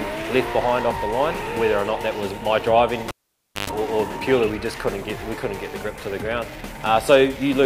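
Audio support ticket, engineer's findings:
Cable pulled and plugged in, 3.08 to 3.70 s. Pop, then near silence for about 0.57 s. A 50 Hz mains buzz lasts 0.12 s as the plug tip makes partial contact. A second pop follows as the signal returns. Probable component is the jack or cable on a live input. Ground makes contact late, so the hot conductor picks up hum.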